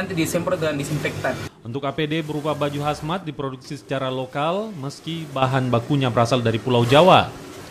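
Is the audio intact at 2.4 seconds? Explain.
Yes, at 2.4 seconds the audio plays through cleanly, with no dropout, click, distortion or other fault at that moment.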